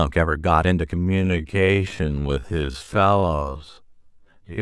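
Software likely stretched this speech recording to half speed from 0.92 s to the end, a time-stretched section that keeps pitch but drags the pace.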